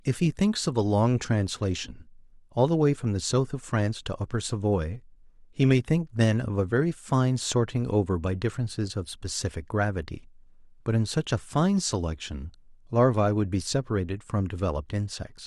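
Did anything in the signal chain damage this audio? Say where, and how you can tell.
No, nothing in this signal chain damaged the audio.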